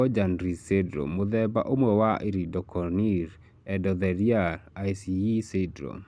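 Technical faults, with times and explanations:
No technical faults detected.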